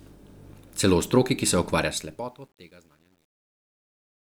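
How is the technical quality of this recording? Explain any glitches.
The recording has one audible defect, in its closing fade. From 1.75 s, right after "v stroki ki se", there is truncation distortion on the fade. A fade starting at 1.75 s is rounded to too few bits without dither, which fits a 10-bit stage. The tail turns gritty, worst from 2.29 to 4.23 s. Unlike clipping, the grit grows as the level falls.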